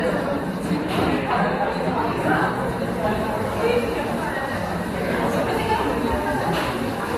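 Transcoding between lossy codecs is heard from start to end. The sound likely passed through MP3 and then Vorbis, each at modest bitrates. Nothing remains above 15.6 kHz. The artefacts from both stages layer together and are heard at once.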